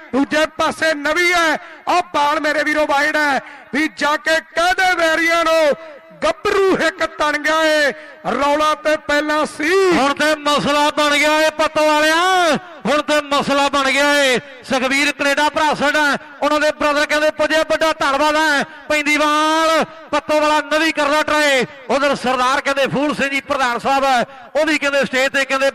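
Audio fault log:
throughout: MP3 compression. Faint detail flickers in and out as the encoder likely starves weak frequency lines of bits, giving a plainly audible watery swirl and smeared attacks, consistent with about 64 kbps MP3.
3.46 s and 18.63 to 18.65 s: corrupt frame decoded. Damaged compressed data was played anyway, putting energy at wrong frequencies for roughly one frame, then about two, heard as brief glitches peaking near -25 dBFS and -20 dBFS respectively.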